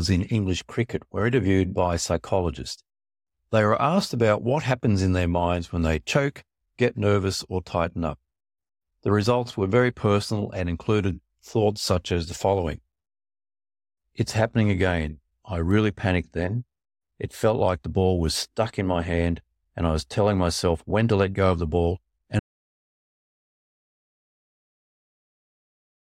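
At 22.39 s the input signal was likely lost while the recorder kept writing silence, an audio dropout to silence. Right after "go of the ball" the speech cuts off mid-flow, and complete silence with no room tone runs to the end.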